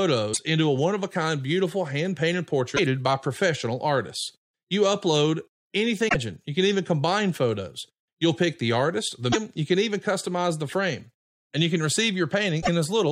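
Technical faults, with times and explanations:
0.30–0.39 s, 2.73–2.79 s, 6.05–6.16 s, 9.29–9.36 s, 12.58–12.69 s: damaged data in the compressed stream. The decoder misreads corrupted frames and loses sync, producing brief chirps or blips in the speech.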